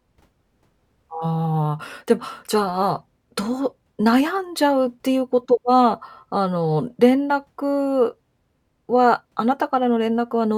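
Speech recording, no audible faults.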